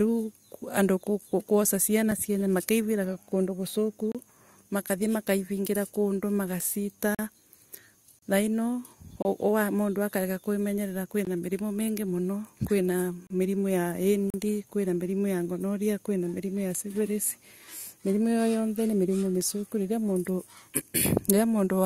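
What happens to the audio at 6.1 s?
Nothing goes wrong at 6.1 s; the speech carries on intact through that moment, with no dropout, click, glitch or other audible fault.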